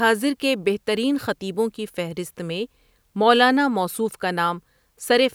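No technical faults can be heard in the speech at any point; the signal holds steady throughout, with no breaks, distortion or disturbances.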